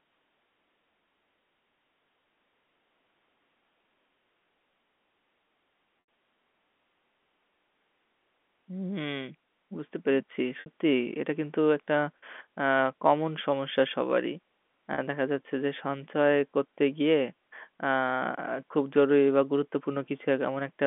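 At 6.02 s, 10.60 to 10.66 s and 14.94 to 14.98 s, packet loss with pitch repetition fills gaps of 80, 60 and 40 ms by looping the last pitch period. Each gap begins as a brief buzzy hold, with flat, evenly spaced harmonics and identical repeating waveform cycles that taper in level; the 80 and 60 ms gaps fade into silence before the speech returns with a short cross-fade.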